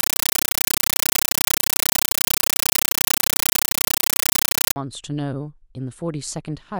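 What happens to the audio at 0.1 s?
A compressed stream played as audio runs from 0.0 to 4.76 s. An AC-3 (Dolby Digital) bitstream, consistent with a 448 kbps stream, was passed along the digital link as if it were ordinary samples instead of being decoded. Each coded frame comes out as a 9.33 ms blast of noise followed by silent padding, repeating at 31.25 Hz, so the speech is replaced by very loud, chattering static.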